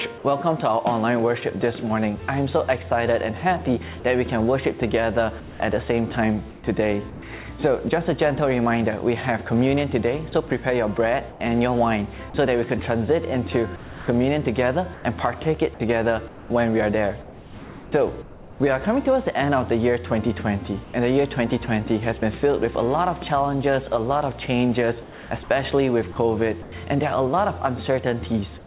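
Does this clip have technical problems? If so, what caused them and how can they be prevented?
Yes. The clip has three kinds of fault. All of them point to the sender's voice detector and discontinuous transmission, with comfort noise inserted at the receiver.

Sound dropped by the voice detector: From 4.00 to 4.04 s, 40 ms of sound gives way to steady noise and then returns. This is likely a voice detector that judged a quiet moment to be background and stopped sending, so the receiver filled the gap with comfort noise. On a spectrogram the detail of that instant is replaced by a smooth, even-textured patch, and on the waveform the envelope flattens briefly. Lowering the detector's threshold or adding a hangover time would keep brief quiet passages from being cut.

Sound chopped by the voice detector: The sound turns choppy over five stretches:
5.40 to 7.22 s, with about 460 ms replaced
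10.30 to 12.34 s, with 180 ms replaced
13.76 to 18.60 s, where 1.78 s is lost in pieces
20.84 to 22.22 s, with 120 ms replaced
25.02 to 26.72 s, with 420 ms replaced

Within each stretch the detector switched repeatedly between sending and stopping. Soft edges and quiet parts were replaced by synthetic noise. A spectrogram shows alternating blocks of detailed content and uniform grey noise, and the waveform shows abrupt level steps. Disabling DTX or giving the detector a longer hangover would prevent this.

Comfort noise in place of the background: From 28.58 s to the end, about 90 ms of the real background is replaced by featureless synthetic noise. It sits about 2 dB lower, in a background already about 22 dB below the loud parts. The cause is likely the sender pausing transmission during silence. On a spectrogram the fine texture gives way to a flat, smooth band that stops at 4 kHz like the rest of the narrowband call audio. 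Turning off discontinuous transmission keeps the real background.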